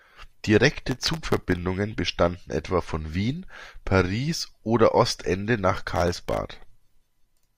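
From 0.79 to 1.58 s, and again from 5.76 to 6.37 s, the speech picks up processor overload crackle. The machine keeps missing deadlines on tiny buffers, well under a millisecond each, and replays stale audio with hard edges, so dozens of misses pile into a gritty tearing.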